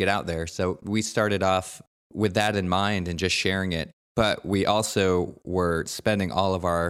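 No technical faults can be heard anywhere in the speech recording. Nothing in the signal calls for comment at any point.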